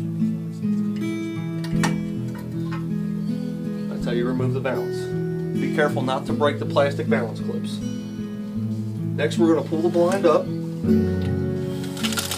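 Nothing in this audio stands out as a technical fault; it just runs along steadily with nothing going wrong anywhere along the way.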